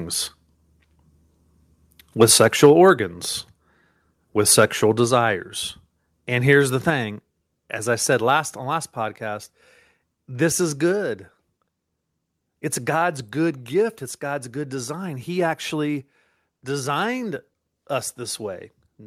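From 2.21 to 2.71 s the loudest speech takes on a crackling, distorted edge, with around one and a half percent of samples flattened. This is likely microphone overload: input gain sat too high, driving peaks about 3 dB past the converter's limit so their tops were clipped off.

At 2.66 s, just before that distorted stretch ends, speech and background together drop suddenly by about 2 dB, and the same one-step drop recurs at 8.37 s. Both fit microphone volume stepped down, where call software reacts to an over-loud input by cutting the device's gain in a single move.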